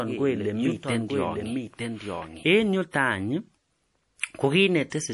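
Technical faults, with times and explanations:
throughout, MP3 compression: clearly audible watery, swirling artefacts and nothing above 11.5 kHz, likely from an MP3 encoding at a low bitrate, which fits about 48 kbps. With too few bits, weak frequency lines switch on and off between frames, and the encoder cuts the treble at a fixed frequency.
0.0 to 2.44 s, doubled audio track: already under way when the clip begins, a full-band copy of the speech trails roughly a second behind, about 5 dB quieter, with no decay or room colour, and stops abruptly at 2.44 s. This likely comes from a second capture path or an edit holding two out-of-step copies.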